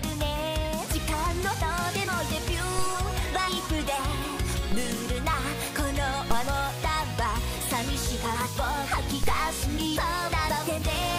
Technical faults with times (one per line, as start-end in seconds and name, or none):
2.79 DC step
4.72 DC step
6.31 DC step
9.23 DC step